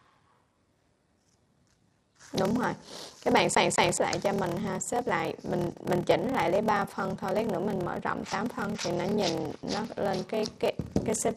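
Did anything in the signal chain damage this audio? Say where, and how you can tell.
Yes. A steady buzz at about 38.3 Hz runs under the entire clip, and everything plays slow, at roughly 0.89 times normal speed, with no matching drop in pitch. That points to a block size mismatch (padded) at the driver or buffer stage. Each block written is shorter than the block the next stage reads, which fits 1024-sample writes, so the remainder is filled with silence. Those regular gaps make the buzz and stretch the timing.

Between 3.55 s and 3.97 s the same 190 ms stretch of audio plays again twice in a row, each jump marked by a brief mute, giving the quick, even stutter of a skipping disc. This is a CD stuck on one turn, a playback fault from the disc. A scratch sends the laser back one track at the same spot on each rotation, so that slice of sound repeats until the player breaks free.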